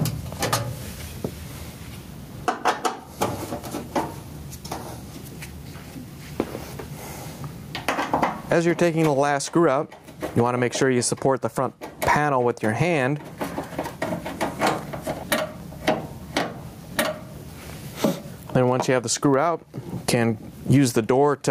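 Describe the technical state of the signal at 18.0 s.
Gain pumping is present at 18.0 s, as it is through the whole clip. The gain swings by roughly 20 dB, with loud and soft parts squashed together, likely from excessive gain driving a fast limiter.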